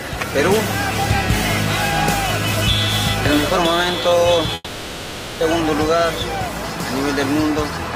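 At 4.55 s the audio stops moving forward. The last sound is stretched into a buzzy, hissy tail that fades over about 0.86 s. A very brief silence follows. At 5.43 s the audio resumes mid-stream, and the material from that stretch never returns. This is most likely a long network dropout. No packets arrived for almost 0.9 s, so the receiver filled the hole by repeating what it last had, then gave up.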